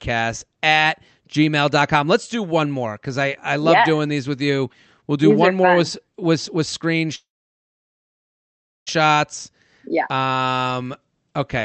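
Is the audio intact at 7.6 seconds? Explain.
No, a call audio freeze runs from 7.15 to 8.89 s, just after "more with with with". Packets were likely held up and the jitter buffer ran dry, so the last sound trails off into about 1.6 s of silence. The audio then resumes where it stopped, with nothing lost, only delayed.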